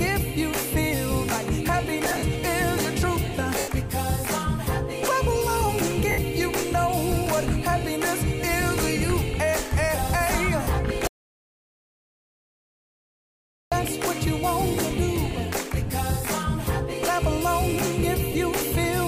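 Lost LE Audio frames at 2.05 to 2.23 s, where about 110 ms goes missing in short bursts over 180 ms (the longest run is around 50 ms), then at 3.58 to 3.68 s (100 ms), 6.11 to 6.18 s (70 ms) and 10.63 to 10.67 s (40 ms). The decoder keeps repeating the last spectrum with scrambled phase, so the sound blurs into a noisy smear before recovering. The lengths fit 10 ms frames.

An audio dropout to silence runs from 11.07 to 13.72 s, about 2.6 s of silence with no room tone. It likely comes from the input being lost while recording continued to write zeros. Whatever played during the gap is gone.

Lost LE Audio frames return briefly at 15.87 to 15.90 s and 18.32 to 18.35 s, about 30 ms each, as short smeared blips.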